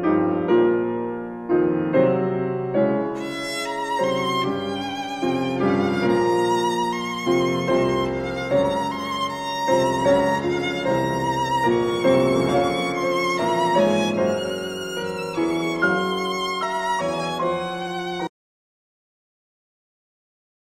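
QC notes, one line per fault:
18.28 s to end: audio dropout to silence, sound cuts off mid-flow into silence with no room tone, a dead-flat waveform and blank spectrogram, likely a lost input.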